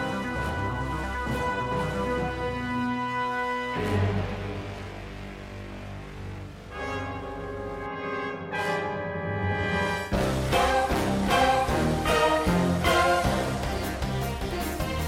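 Nothing goes wrong anywhere in this audio, with no glitches, dropouts or other technical hiccups to point to along the way.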